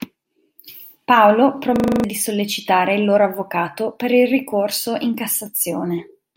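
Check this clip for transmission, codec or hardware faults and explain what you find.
One fault is present: a system hang loop in the speech from 1.76 to 2.04 s. The machine or its audio driver stalled, but the sound hardware kept playing the same ring buffer. A 40 ms slice repeats seven times, exactly alike. At 25 repeats per second, it comes across as a rapid stutter on a steady rhythm. The speech never moves forward during the loop. About a third of a second of real audio is lost.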